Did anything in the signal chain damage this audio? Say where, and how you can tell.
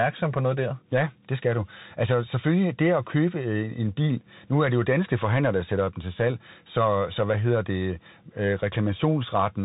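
Yes, at the codec stage: this speech went through a Bluetooth CVSD headset codec for its whole length. Nothing gets past about 3.8 kHz, the s sounds come out scratchy, and there's a granular hiss underneath, which fits a 64 kbps one-bit delta stream whose adaptive step can't keep up.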